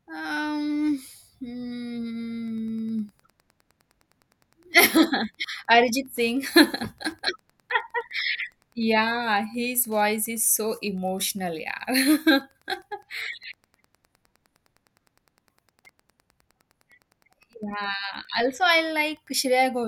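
From 2.47 s to the end, Wi-Fi interference runs under the speech. A nearby Wi-Fi radio's beacon, repeating every 102.4 ms, is rectified by the audio circuit. It comes through as a steady ticking about ten times a second, roughly 40 dB below the speech.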